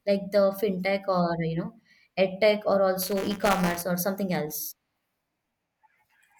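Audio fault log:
3.02–3.82 s, buffer tearing: a steady 200 Hz robotic rattle, since a sliver of each roughly 5 ms buffer replays audio from about 15 ms earlier, with hard joins.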